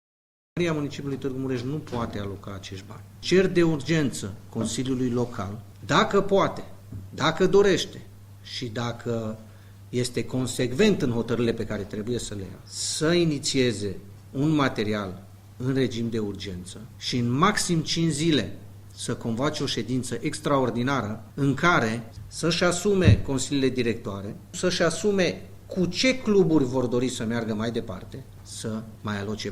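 A cut-off start leaves digital silence until 0.57 s, where sound begins abruptly mid-event with no attack, showing as a flat waveform, then a vertical spectrogram edge.

From 10.24 to 12.24 s, an adaptive stream at a lower bitrate roughens the sound with rising codec artefacts, as if from Opus 64 to 24 kbit/s, with the quality changing suddenly and without a gap.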